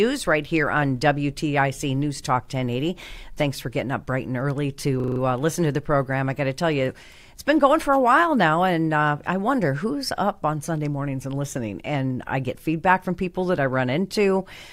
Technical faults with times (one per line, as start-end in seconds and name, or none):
5.00-5.20 system hang loop